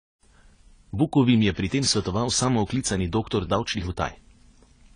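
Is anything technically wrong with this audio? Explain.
Yes. Throughout the speech, the sound is dull and smeared, with nothing above 10 kHz and a watery, warbling texture on sustained sounds and sibilants. This is likely AAC compression, in its AAC-LC form, at a bitrate that fits roughly 24 kbps. At that rate the encoder can't afford the upper band, so it cuts everything above the cut-off. It also quantises the remaining spectrum so coarsely that gaps open and shift from frame to frame, producing the warble.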